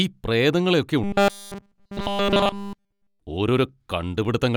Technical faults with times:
1.04-3.20 robotic sound from repeated short buffers

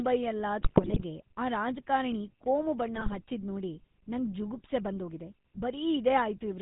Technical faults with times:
0.00-6.62 GSM full-rate codec
0.60-1.03 GSM bit errors
2.94-3.22 GSM bit errors

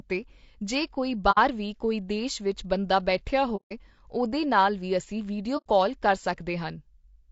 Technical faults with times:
0.00-7.31 low-delay AAC compression
1.31-1.38 AAC frame loss with muting
3.56-3.72 AAC frame loss with muting
5.57-5.67 AAC frame loss with muting

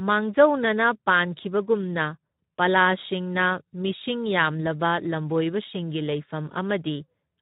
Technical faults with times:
0.00-7.42 Speex codec

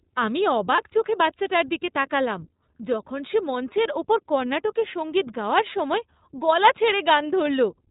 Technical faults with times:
0.00-7.90 iLBC codec
0.76-0.82 lost iLBC frames

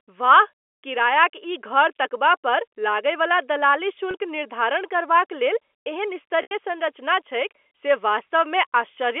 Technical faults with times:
4.11-4.14 packet loss with pitch repetition
6.42-6.51 packet loss with pitch repetition

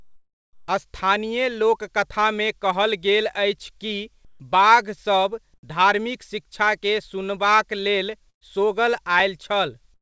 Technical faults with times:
0.00-0.68 comfort noise in place of the background
4.25-4.40 comfort noise in place of the background
5.54-5.63 comfort noise in place of the background
8.30-8.44 burst of packet loss

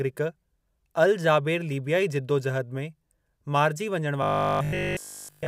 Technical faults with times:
4.23-5.47 robotic sound from repeated short buffers

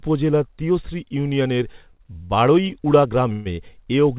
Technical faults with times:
1.72-2.73 repeated stalls (stutter)
3.32-3.47 call audio freeze

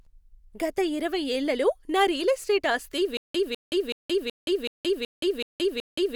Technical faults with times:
3.17-6.16 stutter with silent gaps

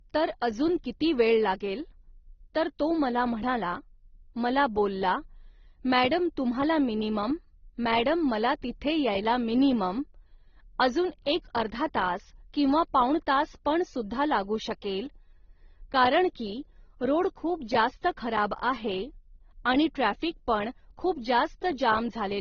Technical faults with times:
0.00-22.40 transcoding between lossy codecs

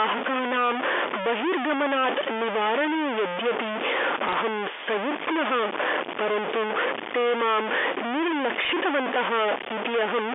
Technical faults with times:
0.00-10.34 stuck bit
4.29-4.33 bit errors on a digital phone line
8.65-8.70 bit errors on a digital phone line

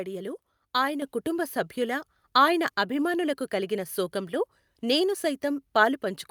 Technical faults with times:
1.02 microphone volume stepped up

